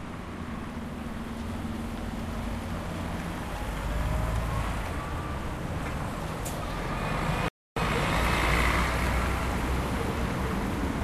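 At 7.48 s a playback stall silences the sound for 280 ms until 7.76 s, likely the player starving of data; waveform and spectrogram show a flat, empty gap.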